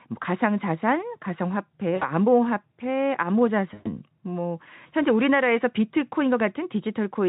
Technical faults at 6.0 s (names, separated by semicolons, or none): none